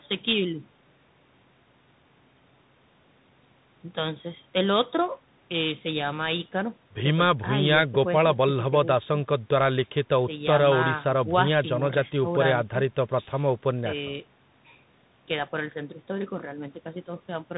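Throughout the speech, the Bluetooth CVSD headset codec's one-bit up/down coding, consistent with a 64 kbps link, plainly audibly distorts loud high sounds, makes s sounds scratchy, and adds granular hiss. A spectrogram shows nothing above 4 kHz and a speckled noise floor between syllables.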